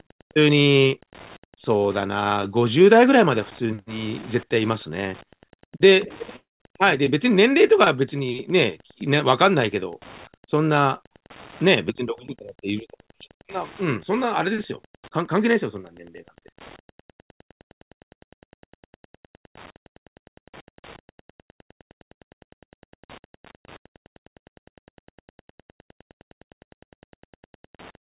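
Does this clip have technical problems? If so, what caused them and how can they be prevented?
Yes. Wi-Fi interference runs through the whole clip. A faint tick repeats every 102.4 ms, about ten times a second. It sits roughly 30 dB below the speech. A nearby Wi-Fi radio's beacon is being rectified by the audio circuit. Keeping routers and wireless devices away from microphones and cables prevents it.

A long network dropout hits at 6.36 s and lasts until 6.61 s. The last sound smears into a fading buzz or hiss. Then about 170 ms of silence follows. The speech returns with roughly a quarter second missing. The likely cause is lost network packets. A stable wired connection prevents it.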